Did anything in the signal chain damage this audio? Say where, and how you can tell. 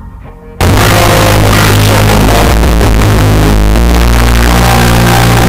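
Yes. From 0.61 s to the end it turns to very loud, harsh distortion, with quiet bits blasting as hard as the rest. That's signed and unsigned mixed up at sample-format conversion, likely 8-bit data read with the wrong sign. The top bit flips, so every zero crossing jumps full range.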